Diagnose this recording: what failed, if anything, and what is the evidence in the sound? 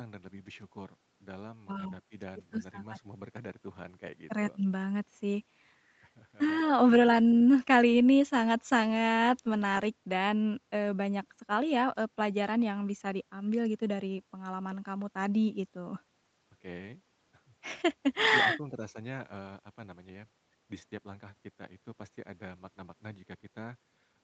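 Nothing failed in this recording, and the sound gives no evidence of a fault at any stage.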